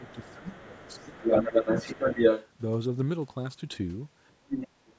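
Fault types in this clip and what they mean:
Speech suppressed in double talk: while both ends talk at once, this speech ducks by roughly 15 dB in the first second, slightly around 1.5 s, and by about 30 dB near the end, likely because the echo canceller mistook it for echo; unlike dropouts, the dips track the overlap.
Other side's voice leaking through: a second voice plays under this speech, strong and even above it through the first 2.5 s, then in a faint scrap near 4.3 s and a stronger one near 4.6 s, likely loudspeaker echo the canceller left in.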